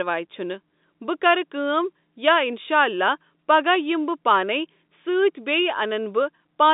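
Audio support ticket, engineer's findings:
Nothing to flag on this speech clip; it's a normal G.711 telephone line, with the band running roughly 200 Hz to 3.7 kHz and nothing above about 3.8 kHz.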